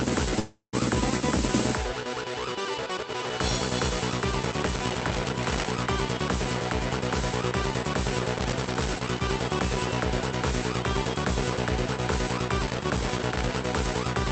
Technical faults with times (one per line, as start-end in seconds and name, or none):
0.39-0.75 call audio freeze
4.45-5.71 loose connector crackle
8.36-9.21 loose connector crackle
12.66-13.55 loose connector crackle